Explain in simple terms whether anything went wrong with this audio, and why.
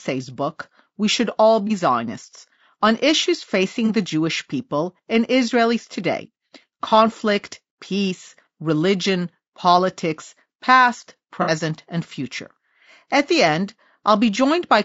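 The whole speech recording has a rough, grainy quality, with a hiss-like fuzz between the voice's tones and a thin, artificial-sounding top end. That's most likely low-delay AAC compression, the kind used on video calls, where short processing chunks and a tight data budget smear the voice's detail.

There are also four brief glitches from AAC frame loss with concealment, at 1.67, 3.86, 6.89 and 11.42 seconds. Small pieces of the audio went missing, and the decoder patched each gap by guessing from the sound just before, so you hear a short smeared, noisy blip. The last one runs about 60 ms, twice as long as the others.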